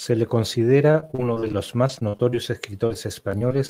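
From 0.91 s to 2.39 s the speech breaks into repeated packet loss with a robotic sound: a rapid string of short holes, the longest about 46 ms, each patched by stretching the preceding sound, so the voice turns choppy and robotic. The same fault returns from 2.86 s to the end, more sparsely. A spectrogram shows smeared, repeated harmonic slices and abrupt vertical edges, while the waveform shows looped segments and small flat dropouts.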